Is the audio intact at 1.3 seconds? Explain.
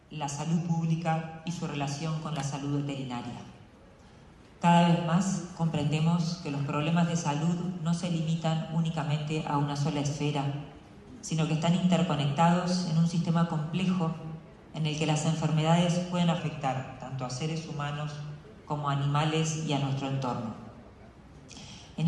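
No. At 1.3 seconds the sound is running slow and flat. From 0.57 s to 1.47 s everything plays about 5.7% slower and drops roughly a semitone (about 102 cents), then snaps back to normal speed and pitch. This is a drift correction step, likely from clock-matching software that cut the playback rate in a single jump to refill its buffer, so speed and pitch moved together instead of being adjusted gradually.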